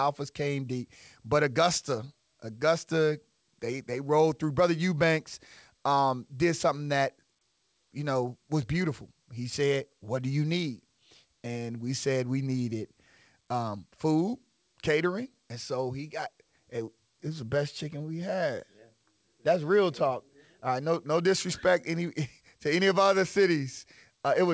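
Nothing goes wrong here at all: the speech arrives over a call connection, and its sound stops at 8 kHz, which fits a wideband codec like G.722.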